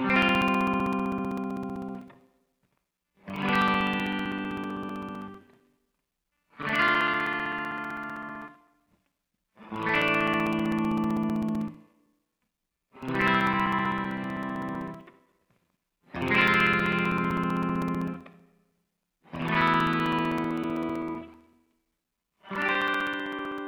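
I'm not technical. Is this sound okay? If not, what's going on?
No. From 0.10 s to 23.58 s there are periodic USB or driver dropouts: every 64 ms, roughly 15 times a second, a few milliseconds of sound go silent. Something keeps briefly blocking the audio connection, and you hear a steady ticking whenever there is sound.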